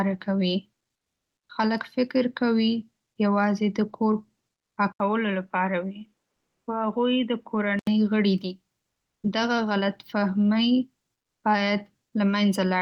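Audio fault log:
0.97–1.49 s, comfort noise in place of the background: for 520 ms before "خلک فکر کوي یوازې" the room tone gives way to a smooth, featureless hiss, about 14 dB quieter and sitting about 64 dB below the loudest speech. This likely comes from discontinuous transmission in the Opus encoder, where the receiver synthesises noise while the sender is silent. A real drop in background would keep its texture, but this fill has none.
1.47 s, onset clipped by the voice detector: about 20 ms of the start of "خلک فکر کوي یوازې" is missing, so the speech begins abruptly out of the synthetic hiss with no soft attack. The cause is likely the same DTX voice detector reacting late and withholding the first frames. It differs from a dropout because the loss falls exactly at the onset, right where the comfort noise ends, and nowhere in the middle of the sound.
4.92–7.87 s, input switched to a poorer device: after an 80 ms gap the speech turns dull and boxy, with nothing above 3.8 kHz, a slightly lower level and a different, faint noise floor, until it clears before "غړي دي". 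A change of microphone or a headset call profile is the likely cause. The Opus path itself passes up to 12 kHz and sounds full on either side, so the narrowing comes from the input device, not the codec.
6.35–6.67 s, comfort noise in place of the background: within the switched section a second 320 ms stretch of steady synthetic hiss replaces the background, only about 3 dB quieter and about 57 dB below the loudest speech, likely the DTX fill again. Because it sits on the poorer device's own noise floor, it shows as a loss of texture more than as a drop in level.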